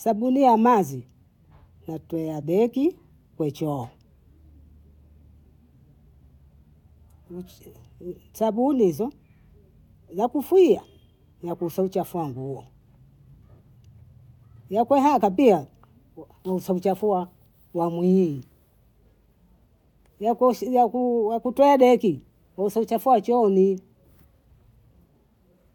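No technical faults can be heard anywhere in the recording.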